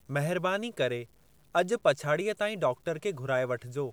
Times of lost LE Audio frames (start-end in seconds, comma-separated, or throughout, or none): none